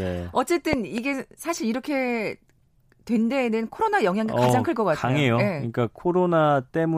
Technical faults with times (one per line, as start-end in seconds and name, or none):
0.73-1.00 loud pop
4.49-4.51 loud pop